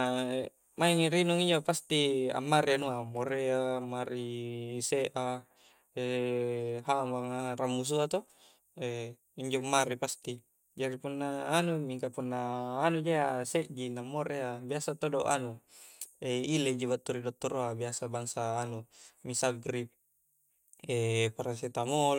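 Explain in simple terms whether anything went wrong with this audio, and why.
No faults can be heard.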